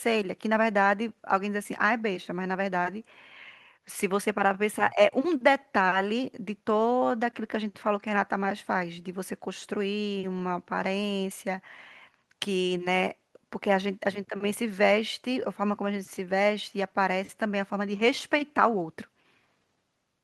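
No technical faults can be heard anywhere in this recording.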